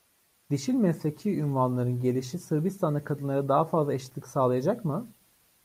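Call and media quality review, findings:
No audible defects in the speech signal: level, continuity and bandwidth stay stable throughout, with nothing pointing to a problem in capture, processing or transport.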